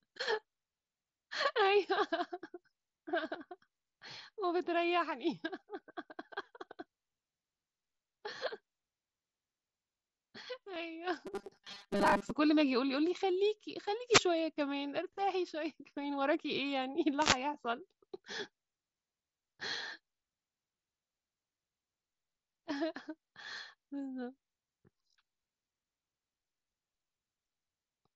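At 10.74 s a brief concealed Bluetooth headset packet loss fills about 15 ms with a copied stretch of earlier waveform, which fits a couple of lost frames. It is nearly hidden, leaving only a faint repeated-cycle seam in the waveform.

From 11.27 to 12.30 s the sound turns into a rigid metallic buzz at 200 Hz. This is robotic sound from repeated short buffers, likely caused by a 5 ms block being repeated while roughly half the real audio is skipped. On a spectrogram it appears as evenly spaced harmonic lines locked to 200 Hz.

Two wireless microphone noise hits follow, at 14.07 to 14.25 s and at 17.18 to 17.38 s. In each, a radio fade raises receiver noise into a short swish of static. On a spectrogram each shows as a broadband vertical smear.

The mSBC headset codec caps the spectrum at 8 kHz and adds light graininess.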